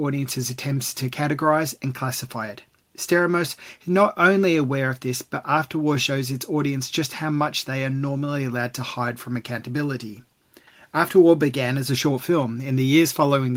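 No technical faults can be heard anywhere in this recording.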